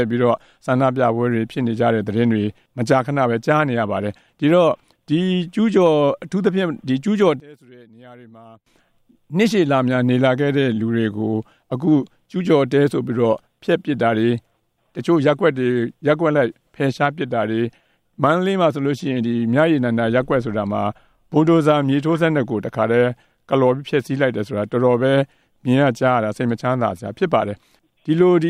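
From 7.4 s to 8.66 s the sound suddenly collapses, dropping by about 26 dB into a faint trace that lacks its centre before snapping back to full level. The likely cause is one channel inverted: with one stereo side flipped in polarity, everything shared by the two channels cancels when they are summed to mono, leaving only the small difference between them.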